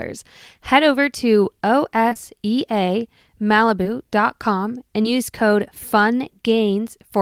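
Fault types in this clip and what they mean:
Short concealed packet loss: at 2.09 to 2.17 s, 3.83 to 3.87 s and 5.03 to 5.16 s, 20 ms pieces of speech arrived too late, so the receiver stretched the preceding sound over each gap, leaving brief smears, and the last one adds roughly 10 ms.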